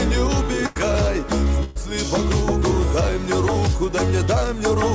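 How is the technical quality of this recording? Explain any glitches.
The quality is marred by two short dropouts typical of a call connection, and the sound has no content above 8 kHz, which fits the G.722 codec at 64 kbps. Burst of packet loss at 0.66 to 0.77 s and 1.63 to 1.77 s: consecutive packets arrived too late or not at all, so the receiver stretched the last sound and faded it, producing a brief held buzz or hiss before the audio jumps ahead, with roughly 100 ms and 120 ms missing.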